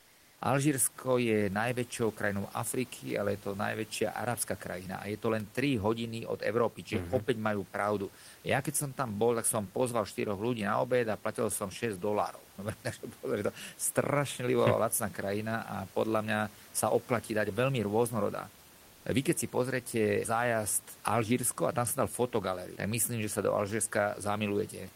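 From 0 to 0.41 s, before the speech begins, there is comfort noise in place of the background. The room noise, which elsewhere sits about 28 dB below the speech, gives way to a steady, featureless hiss about 1 dB quieter. The likely cause is discontinuous transmission: the sender went silent during the pause and the receiver synthesised roughly matched noise. On a spectrogram this stretch is a smooth, uniform wash with none of the room's texture, and the waveform is flat and even.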